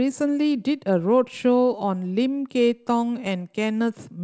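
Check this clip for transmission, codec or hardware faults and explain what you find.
Nothing faulty can be heard in this speech.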